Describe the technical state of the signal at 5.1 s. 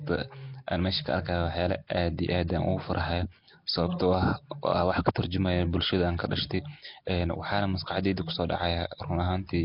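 A brief hiss at 5.15 s arrives just ahead of a sharp onset in the speech, softening its edge. This is pre-echo. The transform block's quantisation noise, sized for the loud attack, spreads back into the quiet moment before it, smearing about 13 ms earlier.

Around that moment, and throughout, the speech carries a rough, hissy halo and a murky, underwater smear, with nothing above 5.3 kHz. This heavy damage is likely Nellymoser compression at a low bitrate near 22 kbps. Weak bands receive no bits and are filled with noise.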